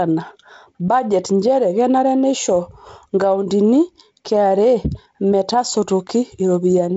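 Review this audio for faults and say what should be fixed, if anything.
No faults; nothing to fix.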